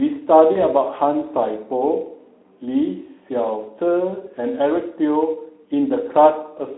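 At 0.51 s the speech breaks up through VoIP packet loss concealed by the speech codec. About 40 ms of audio never arrived, which fits two lost 20 ms frames. The decoder filled the gap by repeating its last pitch and spectral shape at falling gain. That gives a brief, smeared buzzy tone or coloured noise that fades. Each rebuilt frame leans on the one before, so the voice stays weak or distorted until about 0.65 s.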